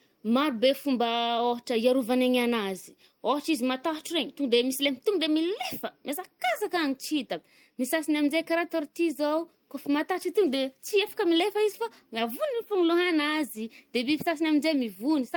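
Nothing stood out on listening to this speech recording.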